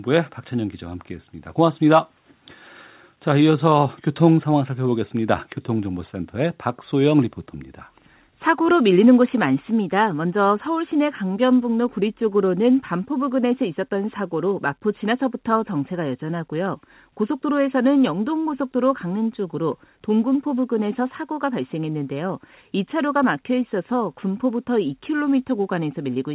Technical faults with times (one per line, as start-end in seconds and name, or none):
none